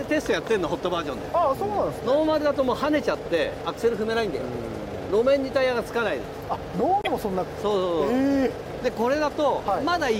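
At 7.02 s the sound is disrupted for about 58 ms, ending at 7.07 s, and continues from a point slightly further on. This is likely a broken MP3 bit reservoir. Frames were lost, so the frames that followed reached back for borrowed data and decoded bytes belonging to different frames. The length of the disturbance fits roughly two frames of about 26 ms each before decoding recovers.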